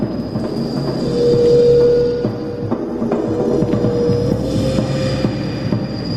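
At 0.98 s a call bitrate drop begins, lasting until 5.31 s. The encoder is squeezed to far fewer bits, consistent with a fall from about 96 kbps to 16 kbps. High frequencies vanish. The sound turns muffled and watery, worst for roughly 2.5 s.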